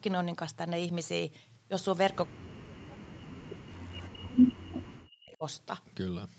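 An echo canceller likely mistook this talker for echo during double talk, causing speech suppressed in double talk from 2.27 to 2.89 s and 3.16 to 5.44 s, dipping by around 40 dB and cutting out in pieces.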